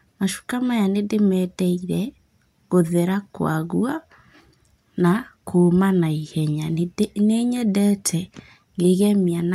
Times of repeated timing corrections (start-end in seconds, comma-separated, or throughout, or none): none